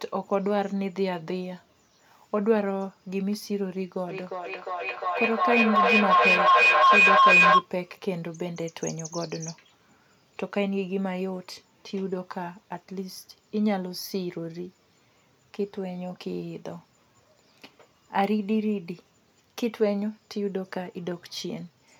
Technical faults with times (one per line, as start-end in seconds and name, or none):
4.09-7.70 feedback echo between two devices